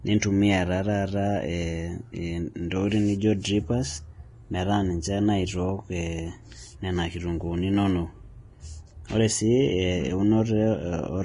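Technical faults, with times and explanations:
Throughout, Vorbis compression: the speech stops dead at 10.6 kHz, and its treble is hissy and grainy, with roughened tones and blurred attacks. This is likely a heavily squeezed Vorbis encode, consistent with roughly 30 kbps, where coarse treble quantisation turns fine detail into noise.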